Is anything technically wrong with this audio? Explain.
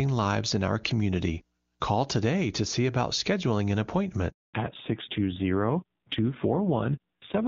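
Yes, there are two problems, both at the same moment in this speech clip.

At 4.30 s there's a handover gap: the call jumped between networks and no speech frames got through for about 240 ms, until 4.54 s. The voice fades out almost instantly, sits in silence, and whatever was said there is simply gone.

From 4.54 s to the end there's a fallback to narrowband. Before that, the HD Voice link sounds clean, consistent with AMR-WB at its top rate. Afterwards nothing above 4 kHz survives, and the voice goes dull and raspy, which points to AMR-NB at a low rate like 5.9 kbit/s.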